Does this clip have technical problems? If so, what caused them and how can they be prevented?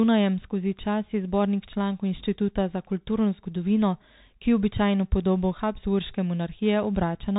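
Yes. Throughout the speech, the sound is muffled, with nothing above 3.8 kHz, a granular hiss underneath and scratchy s sounds. This is the Bluetooth CVSD headset codec, which codes each sample as a single up-or-down bit with an adapting step, consistent with a 64 kbps link. Recording through a wideband Bluetooth headset mode or a wired microphone prevents it.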